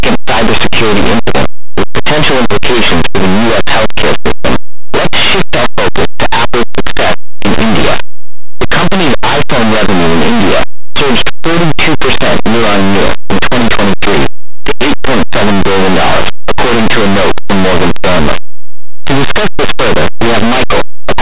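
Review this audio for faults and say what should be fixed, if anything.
Linear audio read as companded runs through the whole speech recording: the samples were written as plain linear 8-bit values but are being expanded as mu-law codes. Small values just to one side of zero land on the largest mu-law outputs, so quiet moments and even pauses burst into very loud, harsh distortion. Ordinary 8-bit quantisation sounds different: it is a faint grainy hiss about 50 dB below full scale, not a loud rasp that persists through gaps. Prevention: make sure the file's declared coding matches how it was written, so the 8-bit data is decoded as linear rather than passed through a mu-law expander.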